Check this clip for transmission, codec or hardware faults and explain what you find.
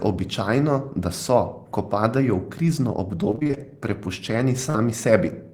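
Two transmission faults show up in this speech clip, both from packets failing to arrive in time.

From 3.31 to 3.58 s the speech turns choppy, with bits clipped out. This is repeated packet loss. Seven short gaps, none longer than 20 ms, land in quick succession. The receiver covers each by stretching the preceding sound, so nearly half of that quarter-second is synthetic fill rather than real audio.

At 4.70 to 4.76 s there is a single brief smear, a wobble where the speech briefly loses its crispness. This is short concealed packet loss. About 40 ms of audio never reached the decoder, and roughly 43 ms was filled by extending the last sound and then blending back into the real signal. The repair is short enough that it comes across as a momentary blur rather than a dropout.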